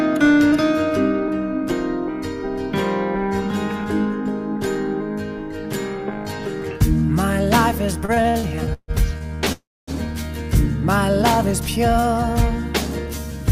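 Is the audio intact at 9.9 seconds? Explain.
No. From 9.52 to 9.91 s a call audio freeze holds the sound: a brief fading buzz or hiss, then about 0.26 s of silence, likely from delayed packets draining the jitter buffer. Unlike a dropout, nothing is lost; the audio resumes where it stopped, roughly 0.35 s late.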